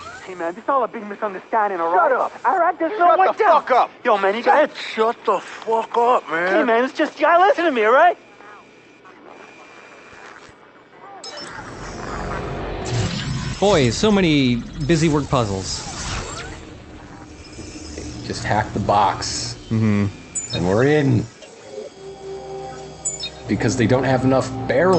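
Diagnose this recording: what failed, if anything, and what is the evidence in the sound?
Nothing failed; no faults found.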